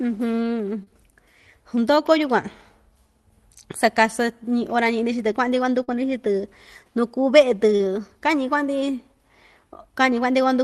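Short concealed packet loss strikes at 0.83–0.90 s, 5.84–5.90 s and 7.76–7.82 s. Each time, 40 ms of speech arrives too late, so the receiver stretches the preceding sound across the gap, leaving a brief smear or wobble before real audio resumes.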